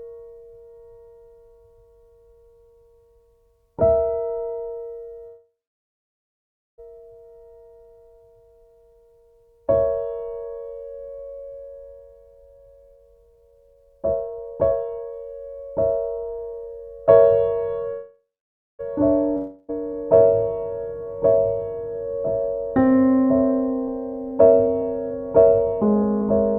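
The audio has two call audio freezes, at 5.27 to 6.80 s and 17.92 to 18.81 s: the last sound continues as a fading buzz or hiss that sinks to silence for about 1.3 s and 0.5 s respectively, then resumes where it stopped with nothing lost, likely from delayed packets draining the jitter buffer. From 11.99 to 17.06 s a jitter buffer speed-up plays the sound at 129% speed with unchanged pitch, trimming roughly one and a half seconds of backlog, and a milder one from 23.88 to 26.22 s runs at 108%, removing about 0.2 s. At 19.37 to 19.70 s a long network dropout fills 0.32 s with a fading continuation of the previous sound, and the audio returns without that missing stretch, likely because packets never arrived.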